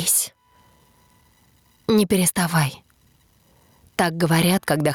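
The audio shows gain pumping throughout, a swing of around 20 dB. The likely cause is input gain set far too high, with a fast limiter repeatedly clamping it, leaving the dynamics squashed.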